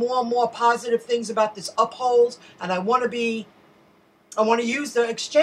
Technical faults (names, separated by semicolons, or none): electrical switching spike